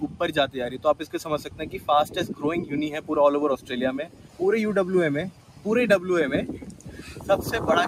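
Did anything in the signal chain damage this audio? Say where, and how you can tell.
Yes. Throughout the clip, the sustained parts of the sound pump and thin out while sharper onsets mostly come through. The level swings by roughly 10 dB as held material and tails sink and recover. This points to call processing, where a noise suppressor applied to music or sounds stayed active. It judged the steady, non-speech content to be background noise and kept turning it down.

The clearest dips are places where the noise suppressor cut the sound: 0.04–0.2 s, 0.99–1.14 s, 1.38–1.88 s, 4.05–4.4 s, 5.3–5.66 s and 6.56–7.29 s. Five drop by about 9 dB, and the 1.38 s dip drops by about 8 dB. The longer ones, up to about 0.7 s, swallow decays and held portions, so the sound fades early. The suppressor's gain is tracking steadiness rather than real noise.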